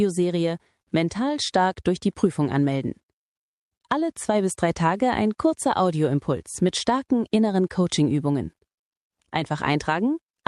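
The audio carries no audible technical faults at any point, with the signal level, continuity and timing holding steady throughout.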